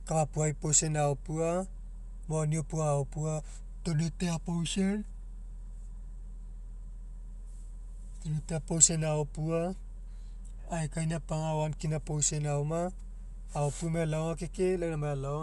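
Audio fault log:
Throughout, Bluetooth LC3 compression: the speech stops dead at 11.5 kHz and carries a plainly audible breathy, grainy edge, where the upper band gets patched in with noise. That's likely an LC3 link, and it fits 48 kbps with 10 ms frames.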